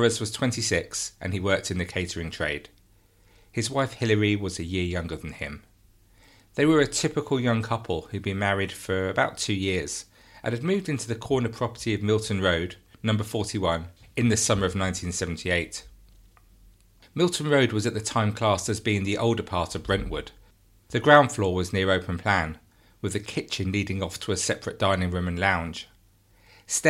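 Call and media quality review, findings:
No faults found on review.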